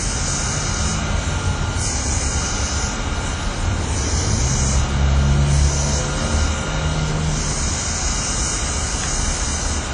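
From start to end the audio sounds washy and ringing, with a hiss that swells and fades with the signal and nothing above about 10.1 kHz. This is likely WMA compression, its damage plainly audible, which fits WMA 1 at around 32 kbps.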